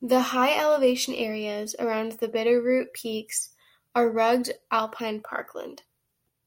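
Nothing in this speech recording stands out as a technical fault at any point.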